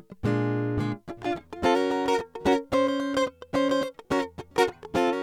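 No technical faults are audible anywhere in the music.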